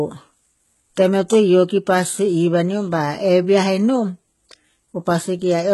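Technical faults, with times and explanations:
Throughout, HE-AAC compression: the speech has heavy codec damage and nothing above about 11.8 kHz. The treble sounds bright but synthetic, and the s sounds come out gritty and lispy. This likely comes from HE-AAC at a low rate, around 16 kbps. The codec spends its bits on the lower spectrum. It rebuilds the upper band by copying lower bands upward under a coarse envelope. Those copied harmonics do not line up with the real ones, so sibilants turn metallic.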